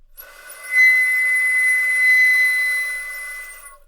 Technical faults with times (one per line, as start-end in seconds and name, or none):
0.64-3.53 call bitrate drop